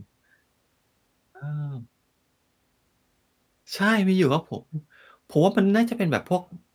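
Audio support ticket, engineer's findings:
Listened to the speech recording and found nothing to flag: no audible issues anywhere in the file, so no faults to log on this ticket.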